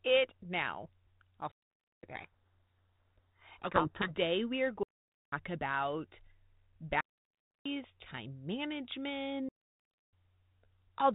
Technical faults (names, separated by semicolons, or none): digital wireless dropout; codec payload misread